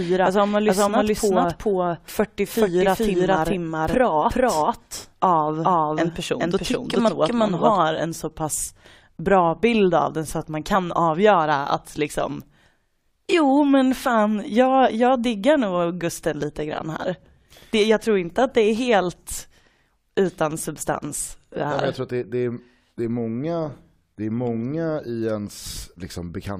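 From the start until 7.77 s, just before "en så pass bra", the speech is a doubled audio track. A second copy, about as loud, trails by roughly 0.4 s. It is dry and full-band. It likely comes from a second, slower capture path.

Compressed frames are skipped at 7.07 to 7.09 s and at 10.74 s. The second falls between "den så att man" and "avgöra att liksom". Audio jumps ahead about 70 ms, then about 20 ms. This fits three frames, then one, of 23.2 ms.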